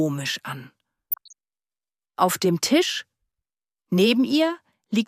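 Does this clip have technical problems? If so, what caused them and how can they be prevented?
Yes. DAB burbling appears from 1.11 to 1.33 s, a short stretch of burbling over the sound. Weak reception let bit errors slip past the error correction into the MP2 audio data. Corrupted samples then put short blips of noise in single sub-bands, and roughly fifteen frames were damaged at an error rate of a few tenths of a percent. Improving the antenna or its placement, or choosing a stronger multiplex, keeps errors below what the correction can repair.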